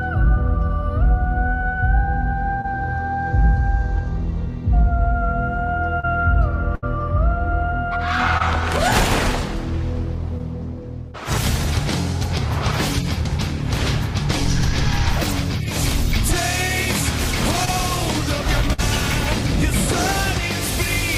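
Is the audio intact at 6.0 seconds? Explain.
No, there's a short concealed packet loss from about 6.00 to 6.05 s. Roughly 40 ms of audio arrived too late, and the receiver papered over 34 ms of it by extending the preceding sound before fading back in, so you hear a brief smear there.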